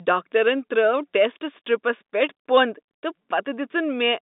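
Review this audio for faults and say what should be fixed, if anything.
Nothing in this speech clip needs fixing. It carries the band-limited sound of G.711 telephone coding, with nothing above about 3.8 kHz, a line band of roughly 200 Hz to 3.7 kHz that fits 64 kbps mu-law, and no more than faint coding texture.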